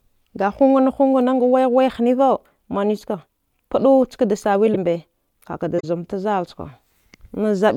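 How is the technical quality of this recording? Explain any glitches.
Two short glitches mar the speech, both from a corrupt frame being decoded. The first runs from 4.66 to 4.76 s and the second from 5.78 to 5.85 s. Each spans a few frames of the compressed stream. Flipped bits there made the decoder read wrong gains and codes, so it placed energy at frequencies the speech never had. The result is a harsh chirp or noise burst peaking around -5 dBFS and -10 dBFS. A lost packet that was concealed would sound smeared or muffled instead, not bright and alien.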